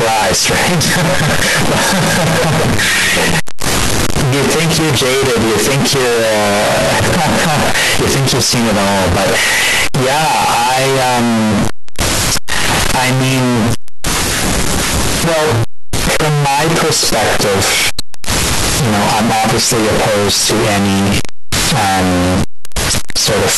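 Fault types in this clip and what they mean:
Float read as integer: the speech stays harsh, square and at an almost fixed, high level throughout, with background noise as loud as speech; pitch remains followable. Likely 32-bit float samples decoded as 32-bit integers.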